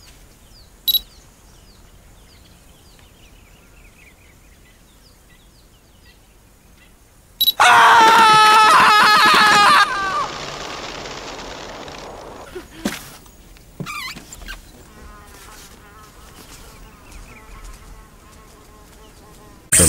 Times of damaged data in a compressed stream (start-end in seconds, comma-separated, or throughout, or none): none